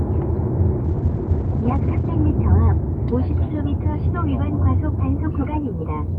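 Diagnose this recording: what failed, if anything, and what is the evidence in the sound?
Network-side call bitrate drop, 0.85 to 2.24 s: the bandwidth estimate fell, starving the encoder, so the sound turns coarse and watery, cut off above 8 kHz.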